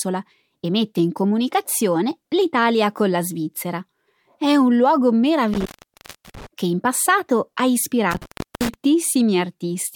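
Right after "un luogo", around 5.53 to 6.47 s, there's an intermittent contact: a loose plug or cable opens, the sound drops out for about 0.70 s with crackle at the edges, then returns at "che in passato ha". It happens again after that phrase, 8.11 to 8.74 s, opening for about 0.37 s.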